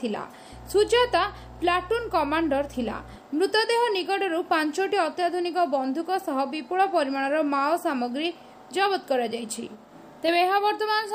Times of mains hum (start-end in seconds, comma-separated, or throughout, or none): 0.53-3.16